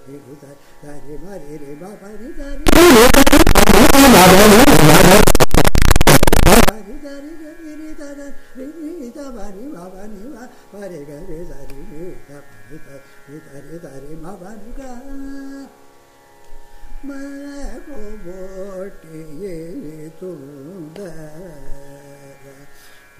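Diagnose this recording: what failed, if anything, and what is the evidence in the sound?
From 2.67 to 6.69 s, loud harsh distortion swamps even quiet parts; likely signed and unsigned mixed up at sample-format conversion, flipping each top bit.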